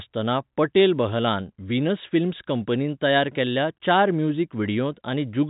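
No technical faults can be heard in this speech. The G.711 telephone coding holds the sound to the narrow phone band, with nothing above about 3.8 kHz, and any quantisation noise it leaves is faint at most.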